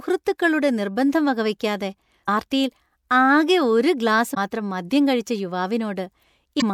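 At 2.25–2.29 s after "നിർബന്ധം വകവെക്കാതെ", 4.33–4.37 s between "ഒരു ഗ്ലാസ്" and "മാത്രം മദ്യം കഴിച്ച", and 6.59–6.63 s, damaged data in a compressed stream makes the decoder misread frames, giving brief glitches that show as vertical broadband smears and waveform discontinuities.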